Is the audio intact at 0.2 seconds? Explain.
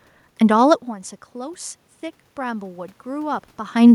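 Yes, the audio is intact at 0.2 seconds, with only the room's own background noise present as part of the recording.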